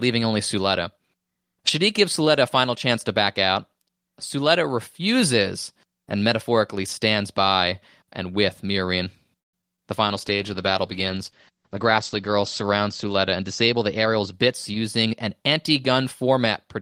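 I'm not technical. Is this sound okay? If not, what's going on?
No. There are four separate problems, all in the second half of the clip.

At 9.39 s the speech stops for about a sixth of a second, mostly dead silence, then carries on where it left off. This is a call audio freeze, likely from delayed network data. Unlike a dropout, nothing is lost. The speech simply arrives late, so a pause is inserted.

Just after, at 9.61 s and 9.76 s, there are two tiny glitches of a few hundredths of a second each. These are short concealed packet loss: small bits of speech never arrived, and the phone papered over them with a brief smear. Here something is actually missing, but it is far too brief to sound like a pause.

From 10.07 s to 15.04 s the voice turns rough and muffled, as the crisp top end disappears. This is a call bitrate drop: the connection weakened, so the call squeezed the sound into far less data. 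Its quality suffers.

From 13.18 s to 15.14 s the speech runs about 6% fast, slightly hurried, while its pitch doesn't rise. This is a jitter buffer speed-up: the phone trimmed tiny slivers, about 150 ms in total, to cut down a backlog of held-up audio.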